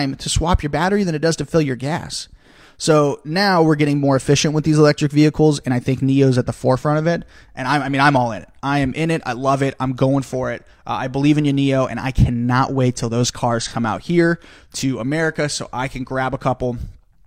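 At 13.62 s, just after "cannot wait till those", there is an AAC frame loss with concealment lasting until 13.74 s. A piece of the coded stream went missing, roughly 43 ms of audio, which fits a single lost frame. The decoder did not go silent. It rebuilt the gap from the last good spectrum, with scrambled signs or interpolated energy. The result is a brief smeared, noisy or phasey patch before "out here to" resumes.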